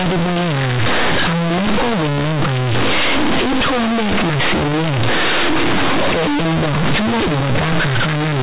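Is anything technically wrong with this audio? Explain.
Yes. Throughout the clip there's companded audio read as linear: mu-law bytes are being played straight as 8-bit samples without expansion. Every sign flip throws the output across half its range, so quiet bits blow up, giving loud, buzzy distortion and heavy noise in pauses.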